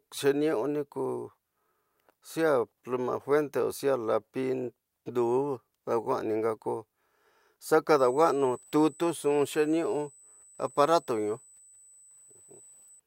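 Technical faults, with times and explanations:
7.99 to 13.00 s, USB whine: a steady, high-pitched tone at 8 kHz sits under the speech for the last five seconds. Its pitch never moves, and it sits about 30 dB below the speech. That pitch points to the 125 microsecond microframes of a high-speed USB bus. Each burst of bus activity pulls current in step with those frames. The ripple leaks into the audio path through shared power or ground, and is heard as a thin, fixed whine.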